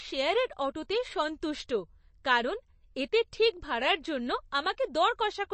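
Throughout, the speech has plainly audible MP3 compression: nothing above 8.3 kHz, with watery, swirling texture, likely from an encoder starved of bits, consistent with roughly 34 kbps. At 1.68 s, pre-echo appears: quantisation noise spread across the transform block leaks about 10 ms ahead of an attack as a brief hiss, softening its onset.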